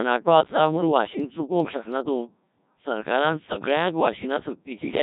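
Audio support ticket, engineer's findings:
Codec 2 vocoder, whole clip. Speech robotic and buzzy throughout, heavy damage. Symptom fits Codec 2 at 1.3 kbit/s. Decoder rebuilds the voice from sine waves using only pitch, voicing, energy and spectral envelope, so the original waveform is lost.

Bit errors on digital voice radio, 0.77 to 0.81 s. Brief warble with a jump in pitch and tone colour, consistent with one corrupted frame at around one bit in ten flipped. Each bad bit skews that frame's synthesis parameters.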